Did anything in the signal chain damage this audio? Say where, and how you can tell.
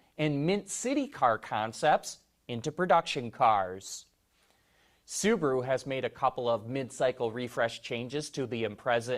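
No, nothing in the signal chain damaged this audio.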